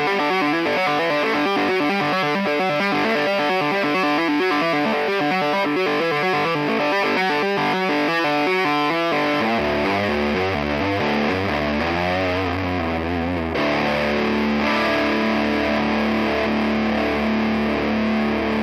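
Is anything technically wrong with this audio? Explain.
Yes, there's sample clock jitter running the whole way through. The converter's clock wobbles by a few microseconds, so samples land slightly off time, and steep, bright passages pick up a gritty hiss, roughly 35 dB below the signal, that disappears in the quiet gaps.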